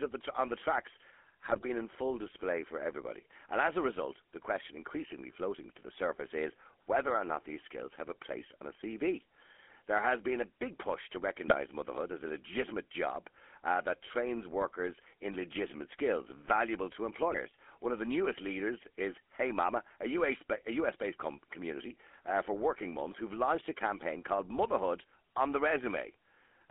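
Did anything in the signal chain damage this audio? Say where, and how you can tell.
Yes. The codec stage did. A GSM full-rate codec runs through the whole clip. It rebuilds the speech from a vocal-tract model driven by thinned pulse excitation, leaving a buzzy, gravelly roughness and a band of about 250 Hz to 3.4 kHz. That fits the 13 kbps GSM full-rate coder.

The radio link added GSM bit errors. Corrupted filter, pitch and gain values reached the decoder and produced brief squawks and gargling bursts. These occur at 1.46 to 1.65 s, at 8.40 to 8.48 s after "these skills have a", at 11.48 to 11.55 s after "big push to", and at 17.30 to 17.39 s after "legitimate skills valuable to". They suggest an error rate of roughly 1 to 2 percent.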